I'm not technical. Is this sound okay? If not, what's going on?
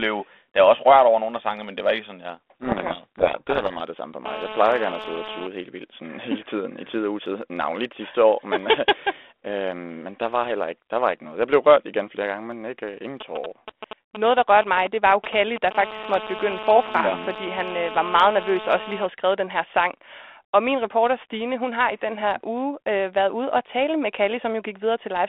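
No. From 2.61 to 3.88 s the speech is buried under harsh, crunchy distortion. This is a codec payload misread. The line carries the voice as compact digital code, the kind used by cordless phones. Here the two ends disagreed on the order of the bits in each small chunk of that code, so the receiving end rebuilt the wrong sound until they matched up again.

From 4.26 to 5.47 s, between "det samme for" and "helt vildt sådan", a hard, raspy buzz sits on top of the speech. It happens again from 15.75 to 19.06 s, ending just before "skrevet den her sang". This is GSM phone buzz. An older-style mobile phone on a call nearby sends radio pulses 217 times a second. The audio wiring picks them up and turns them into a steady, gritty hum that has nothing to do with the speaker.

Just before that second buzz, from 13.21 to 15.73 s, right after "men ikke øh ingen", comes a galloping dit-dit-dit of short bursts of that same buzz. 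These are GSM signalling bursts. The nearby phone was only sending short groups of radio bursts, not a full call stream, so the interference comes in short clusters rather than as a continuous tone.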